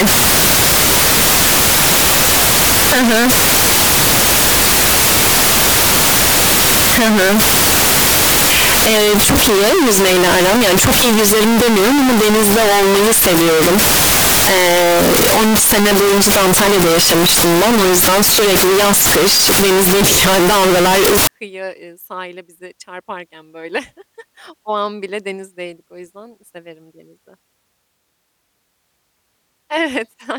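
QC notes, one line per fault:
0.00–21.27 s, float read as integer: the speech is extremely loud and harsh. The waveform is flattened into a near-square shape sitting at an almost fixed, high level, whatever the original level was, and background noise comes up level with the voice, though pitch can still be traced. The likely cause is 32-bit float samples being read as 32-bit integers, so the sign and exponent bits dictate each sample value. The effect stops just before "kıyıya eee sahile bize".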